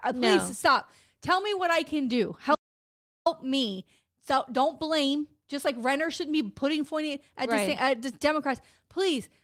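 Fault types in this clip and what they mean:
Audio dropout to silence: The speech cuts off abruptly at 2.55 s and resumes at 3.26 s, leaving about 0.71 s of silence with no room tone underneath, so whatever was spoken in that stretch is lost. This is likely a momentary loss of the input, such as a disconnected device, failed link or accidental mute, while recording continued. On a waveform it appears as a flat line, and on a spectrogram as a fully blank vertical band with hard edges on both sides.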